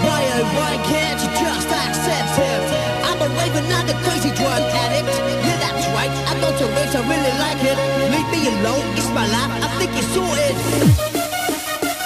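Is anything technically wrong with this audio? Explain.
No, the audio shows no technical faults: the signal stays continuous and stable throughout, with nothing wrong in how it was captured, processed or delivered.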